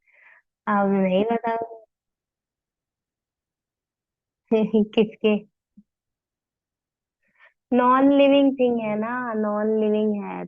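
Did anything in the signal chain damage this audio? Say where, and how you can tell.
No, nothing in the signal chain damaged this audio.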